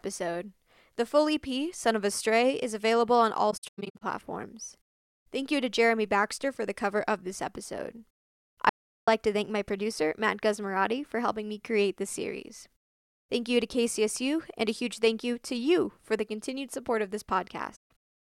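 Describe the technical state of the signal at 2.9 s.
At 2.9 s the speech signal is intact, with no audible technical fault at that moment.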